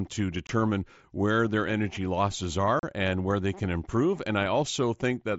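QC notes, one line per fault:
0.47–0.49 s, 2.79–2.83 s and 4.19 s, unconcealed Bluetooth headset packet loss: audio packets between headset and phone failed to arrive and nothing was filled in. The sound drops out abruptly for about 22 ms, 38 ms and 8 ms, which fits three, five and one lost 7.5 ms mSBC packets. The second hole falls just after "where their energy losses" and the third just after "where they can improve." Each gap has hard edges, heard against the light, grainy wideband mSBC sound.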